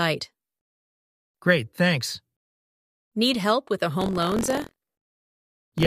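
Buffer tearing starts at 3.97 s and runs to the end of the clip at 5.87 s. The writer and the hardware reader of the ring buffer have drifted into each other, so each period carries a short slice, around a tenth, of audio from roughly 50 ms earlier, joined hard at both edges. Those repeated splices produce a rattling, robotic buzz at 43.1 Hz, a rate that fits a 1024-sample buffer. The buzz is heard only while sound is present.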